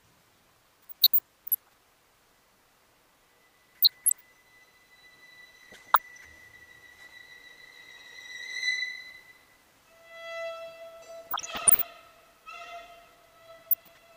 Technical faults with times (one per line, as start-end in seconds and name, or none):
0.81-1.75 DAB burbling
3.71-4.23 DAB burbling
5.56-6.25 DAB burbling
11.26-11.84 DAB burbling
13.64-13.98 DAB burbling